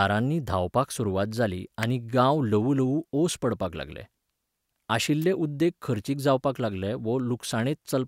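At 1.83 s, between "धांवपाक सुरवात जाली" and "गांव ल्हवूल्हवू ओस पडपाक", a sharp snap sits on top of the speech, and a second one lands at 5.22 to 5.24 s, just before "उद्देग खर्चीक". Both reach roughly -15 dBFS, and both are an electrical switching spike, likely arcing from a nearby switch or motor coupling into the line.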